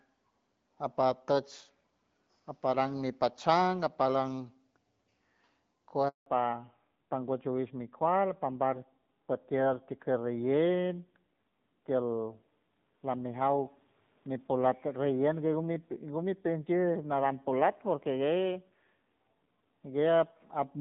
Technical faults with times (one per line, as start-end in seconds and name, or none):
6.08-6.26 handover gap
6.26-20.81 fallback to narrowband